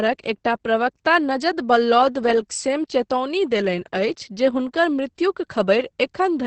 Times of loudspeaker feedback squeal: none

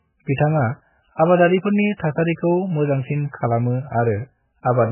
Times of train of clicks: none

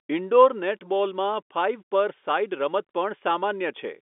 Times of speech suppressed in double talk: none

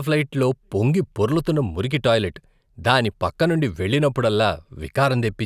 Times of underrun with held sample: none

